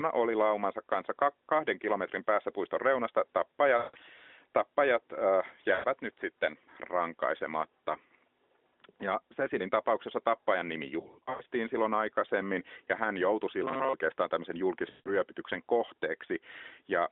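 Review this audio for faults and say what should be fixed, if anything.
Lost AMR speech frames occur at 3.78–3.97 s, 5.74–5.85 s and 14.90–15.11 s. In each, the sound stretches, then fades as the decoder repeats its last good parameters at falling gain. A scattered cluster of short drops runs from 11.00 to 11.42 s, with no gap longer than 0.1 s. Stronger channel error protection or better radio coverage would prevent these frame losses.

Robotic sound from repeated short buffers occurs at 13.64–13.94 s. The sound becomes a rigid, metallic 133 Hz buzz, likely from playback looping a 7.5 ms buffer while fresh audio is late. A larger jitter buffer or steadier audio scheduling would stop the repeats.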